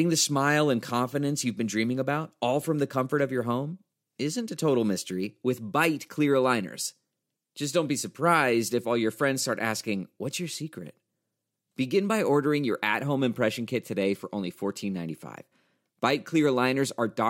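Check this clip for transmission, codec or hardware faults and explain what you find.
Nothing stood out on listening to this speech recording that would point to a problem in how it was transmitted, encoded or captured.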